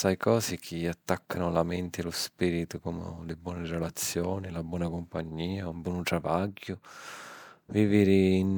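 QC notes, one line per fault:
No faults to note.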